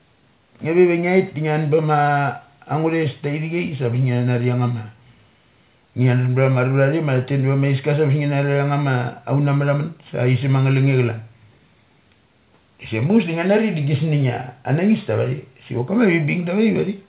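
No technical faults are audible.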